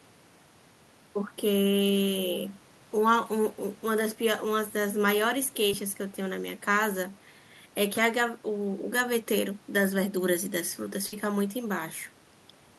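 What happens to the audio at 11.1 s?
At 11.07 to 11.14 s the speech is hit by a burst of packet loss. Several consecutive packets were lost or arrived too late to play, so the receiver concealed the gap by extending the last received sound for about 50 ms and fading it down, which is heard as a brief held buzz or hiss. Playback then resumes with roughly 40 ms of the speech skipped.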